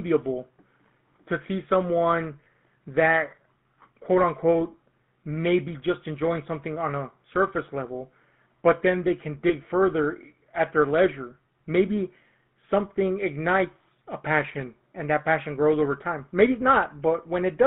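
A buzzy, gravelly roughness runs through the whole speech recording, and the sound is confined to a narrow band of roughly 150 Hz to 3.5 kHz, with nothing bright above it. That is the GSM full-rate codec. It rebuilds the voice from a vocal-tract model excited by a coarse, regularly spaced pulse train, which fits the 13 kbit/s full-rate coder. The damage is plainly audible.

From 2.44 to 2.47 s, and again from 9.48 to 9.53 s, the sound briefly catches on a short rough, metallic ring. These are lost GSM frames. Each time about 20 ms of the signal failed to arrive, and the decoder filled the gap by replaying the previous good frame's settings. Because each loss is so short, the held sound never fades out.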